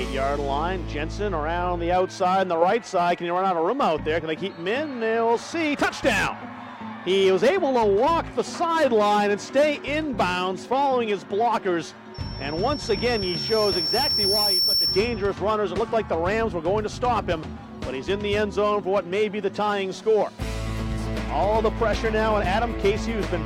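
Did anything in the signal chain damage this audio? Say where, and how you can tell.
Yes. The damage happens in the analogue acoustic loop, where a microphone hears the loudspeaker it drives. From 12.14 to 15.32 s there is loudspeaker feedback squeal. A single tone near 5.4 kHz appears and swells over about three seconds. It ends up roughly 5 dB louder than the sound it sits on. At that frequency the loop gain passed one, so each trip around the loop made the tone stronger until it ended at 15.32 s.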